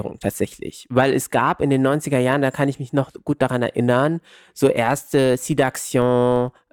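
From 4.86 s onward, after "gut daran erinnern so", the filter restarted on every block, starting each 20 ms block from silence. A 50 Hz buzz follows the speech level, shown as evenly spaced vertical lines on a spectrogram and transients in the waveform.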